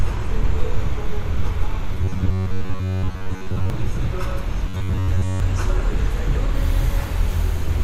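From 1.95 to 3.70 s and again from 4.69 to 5.40 s, the audio turns into a rigid, metallic buzz at about 94 Hz. That's robotic sound from repeated short buffers, likely from roughly 10.7 ms of audio being looped while most of the real material gets skipped.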